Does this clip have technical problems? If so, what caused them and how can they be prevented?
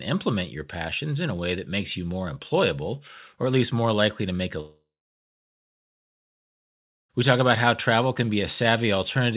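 Yes. After "likely to make a", at 4.6 s, a fading buzz gives way to silence until 7.11 s, losing 2.5 s of speech: likely a long network dropout. A steadier connection with packet redundancy would prevent it.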